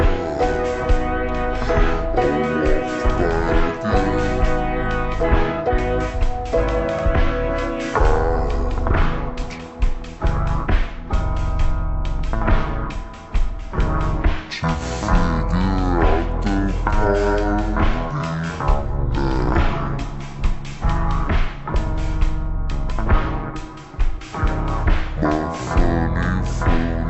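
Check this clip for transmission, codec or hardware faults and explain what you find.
One fault is present, and it runs through the whole clip.

Stereo read as mono, throughout: the left and right samples, which alternate in the stream, are being taken one after another as if they were consecutive samples of a single channel. Each real moment of sound therefore occupies two sample slots, so the audio plays at 0.5 times normal speed and a full 12 semitones, one octave, low, with a fainter mirrored copy of the content showing up in the upper half of the spectrum.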